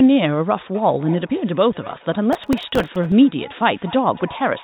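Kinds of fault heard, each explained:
Feedback echo between two devices: From 0.74 s to the end, each stretch of speech comes back as a faint repeat roughly a fifth of a second later, peaking at about 21 dB below the speech. Two devices in the same room share the call: one plays what the other's microphone sent, that microphone picks it up again, and neither device's echo canceller removes sound played by the other.
Processor overload crackle: Between 2.33 s and 3.12 s a gritty, tearing crackle rides on the speech and then stops. The processor fell behind and missed a long run of audio deadlines, something like thirty, with buffers only a few milliseconds long. Each missed buffer was filled with a repeat of old audio with hard edges, and that rapid chain of tiny glitches is what makes the crackle.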